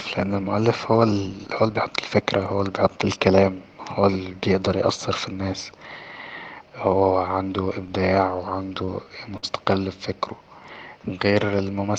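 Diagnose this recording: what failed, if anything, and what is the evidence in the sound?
The network delivery stage failed briefly: two short stalls from a late packet in the speech. Just after "هو عنده إبداع", at 8.85 to 8.90 s, a sound is held about 21 ms too long, and at 9.37 to 9.45 s, just before "ب فكره", a hold of about 57 ms stretches it further. The jitter buffer ran dry, so the receiver extended the last sound and resumed where it stopped. That sets it apart from packet loss, because nothing is skipped and the timing simply shifts later.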